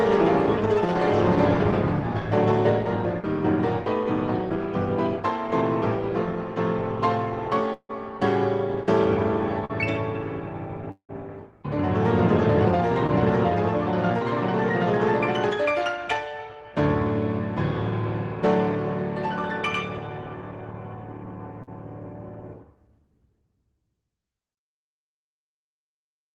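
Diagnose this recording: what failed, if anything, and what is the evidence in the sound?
Network stage, long network dropout. At 7.73–7.91 s and again at 10.91–11.11 s the sound trails off into a fading buzz and then sits in near-silence, about 60 ms in the first case and 90 ms in the second. The audio resumes with roughly 160 ms and 180 ms missing, respectively. The likely cause is a run of packets failing to arrive. The receiver extrapolated the last sound until it ran out, then left a gap, and playback picked up later without the lost section.

Network stage, short concealed packet loss. Brief smears occur at 9.65–9.71 s, 13.07–13.10 s and 21.63–21.69 s, where the sound wobbles instead of continuing naturally. The holes are small, about 40 ms, 20 ms and 40 ms. Each time the decoder received nothing in time and synthesised a continuation of the preceding sound, pitched or noise-like, then cross-faded back into real audio.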